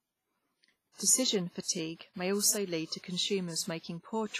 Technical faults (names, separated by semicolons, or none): WMA compression